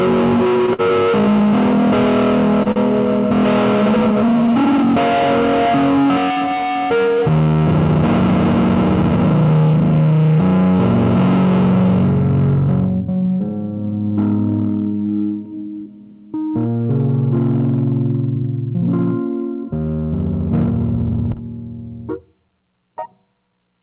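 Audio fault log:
0.73–0.81 s, 2.63–2.68 s and 2.72–2.78 s, short stall from a late packet: a packet turned up late each time and the jitter buffer ran dry, so the last bit of sound got stretched by about 53, 29 and 42 ms. Nothing's lost, it just hangs briefly.
13.26–13.64 s and 20.96–21.25 s, jitter buffer speed-up: too much audio had piled up in the buffer, so the receiver kept snipping out tiny pitch-period chunks, roughly 50 ms each time. It plays at about 113% speed with unchanged pitch, so it sounds briefly rushed.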